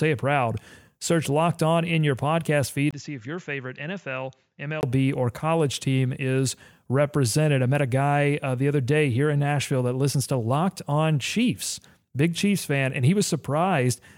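After "in your podcast feed", from 2.91 to 4.83 s, a 20 ms waveform gap leads into duller speech about 10 dB quieter, with the spectrogram empty above 7.4 kHz: likely an input switched to a poorer device.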